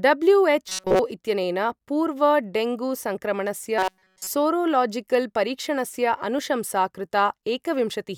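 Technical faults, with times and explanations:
0.69–0.99 s and 3.78–4.30 s, robotic sound from repeated short buffers: the speech collapses into a rigid, metallic buzz locked at 188 Hz, just before "इत्यनेन पूर्वं डेंगू" in the first case. Nearly all of each stretch is repeated material, likely because audio arrived too slowly and a roughly 5.3 ms buffer was looped in its place. Unlike a comb-filter or flanging colour, the buzz rate stays fixed, and the real audio from those stretches is missing.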